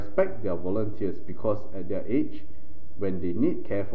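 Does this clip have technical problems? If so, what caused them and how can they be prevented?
Yes, there's a DC offset running through the whole speech clip: the waveform sits shifted off zero by about -22 dBFS. You won't hear it as such, but it eats headroom and shows up as a steady lump at 0 Hz. A high-pass or DC-blocking filter at capture or in the first processing stage would prevent it.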